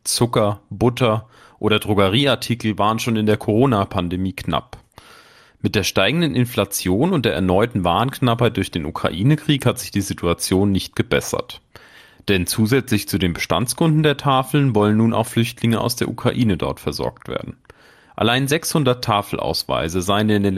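MP2 compression damage runs throughout the speech, from start to finish, and is plainly audible. The cause is likely an MPEG Layer II encoder starved of bits, at a rate that fits roughly 80 kbps. It divides the signal into 32 sub-bands and cannot feed them all, so upper bands drop out and flicker back while the rest are coarsely quantised. The speech sounds dull and veiled, with a gurgling, granular roughness.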